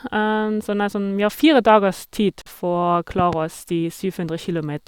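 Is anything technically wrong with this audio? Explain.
Yes, two faults are audible in this speech clip.

At 2.42 to 2.46 s, a gap at a join of encoded pieces cuts the speech with a 48 ms silence with softened edges, then it resumes where it stopped. Separately encoded sections were joined untrimmed, leaving encoder start delay and end padding.

From 3.19 to 3.35 s there is a loud pop, a pair of sharp clicks about 10 dB above the speech, which continues underneath. It is likely a sudden voltage pulse from a plug, switch, static or driver glitch entering the signal chain.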